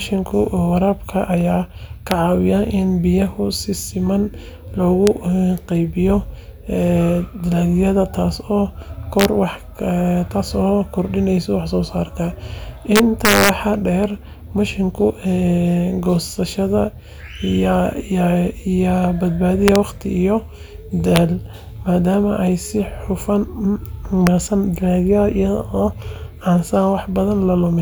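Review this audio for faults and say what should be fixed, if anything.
Integer overflow cracks the speech at 2.11, 5.07, 9.20–9.25, 12.96–13.49, 19.68–19.76, 21.16 and 24.27 s, where peaks overshoot by up to about 2 dB and wrap to the opposite extreme. The waveform shows abrupt sign flips across the range, and the spectrogram shows broadband vertical streaks. Prevent it by saturating the gain stage instead of letting it wrap.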